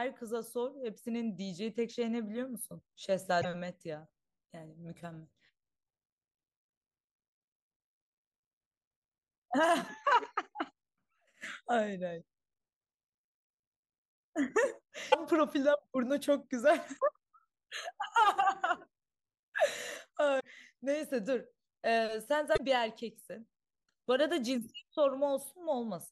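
At 3.38–3.45 s, 15.09–15.15 s, 20.36–20.45 s and 22.53–22.60 s, damaged data in a compressed stream produces short chirps and blips in the speech. Each time, corrupted bytes make the decoder misread frames and lose sync until it finds the next valid header.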